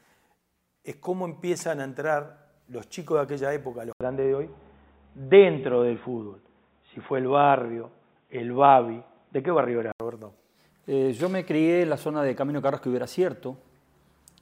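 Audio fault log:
3.93–10.00 s, input switched to a poorer device: after an 80 ms gap, sound turns dull, with nothing above 3.8 kHz, a level change of about 5 dB and a faint new noise floor, then clears. This is likely a device change rather than a filter.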